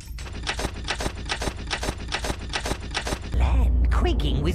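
From 0.67 s to 3.34 s, a 0.41 s fragment repeats six times back to back, a broken-record loop most likely from a stalled player or stream.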